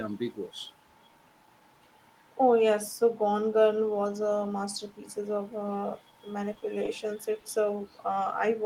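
At 6.53–6.57 s and again at 6.59–6.63 s there is short concealed packet loss: twice, about 20 ms of the speech never reached the decoder, and the receiver filled each gap by extending the preceding sound before fading back into the real audio. Each sounds like a quick smear or wobble.

At 7.40–7.44 s a short stall from a late packet follows. The jitter buffer ran dry, so the current sound was held for about 20 ms until the packet arrived, and then playback resumed from the same point. Nothing is lost, but that sound lingers slightly too long. A spectrogram shows a briefly frozen, level band, and everything after it sits about 20 ms later than it should.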